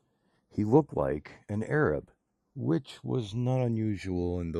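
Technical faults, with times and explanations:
Throughout, channels drifting apart: the two channels run on clocks a couple of hundred ppm apart, so their offset slides to about half a millisecond. Summed to mono, comb notches sweep slowly through the spectrum, heard as a slow flanging over the speech.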